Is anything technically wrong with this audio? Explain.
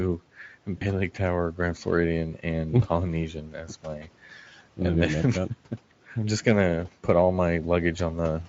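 Yes, there are two faults.

From 0.77 to 0.85 s there is VoIP packet loss concealed by the speech codec. About 40 ms of audio never arrived, which points to two consecutive 20 ms frames. The decoder filled the gap by extending its last pitch and spectral envelope while reducing the gain. This produces a short buzzy or noisy, smeared stretch that fades. Because each decoded frame depends on the previous one, the sound stays weak or distorted briefly after packets resume.

From 3.29 to 4.09 s there is speech cut by the noise suppressor. The suppressor classified part of the speech as background and attenuated it along with the noise, by about 12 dB at its deepest. Roughly half a second of that span is affected. Quiet consonants and trailing syllables come out swallowed and faint against the room noise, which sits about 24 dB below the speech.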